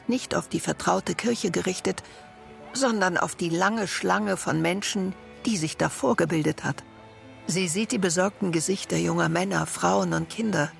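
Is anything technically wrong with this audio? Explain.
No, there are no technical faults.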